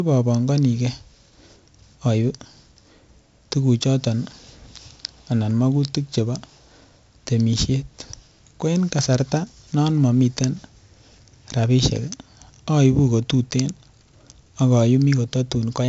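From start to end the speech carries 4-bit ADPCM compression: each sample is coded as a coarse step from a prediction, so a gritty hiss rides every loud syllable and sharp onsets distort. Nothing reaches above 7.7 kHz, which fits a 64 kbps stream at a low sample rate.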